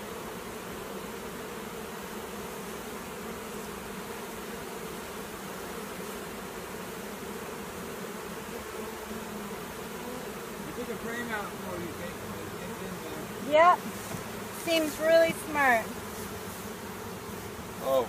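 Nothing in this audio stands out as a technical fault. No dropouts, glitches or other disturbances can be heard anywhere in it.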